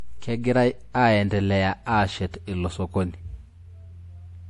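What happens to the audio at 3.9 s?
At 3.9 s you're hearing the same damage that runs through the whole clip, most likely MP3 compression at a low bitrate, something like 48 kbps. Nothing gets through above about 11.4 kHz, so the top end sounds dull. Squeezed for bits, the encoder drops the weak frequency lines, and they flicker on and off from frame to frame. That gives the speech a watery, swirly quality, with metallic chirps on the s sounds and smeared attacks.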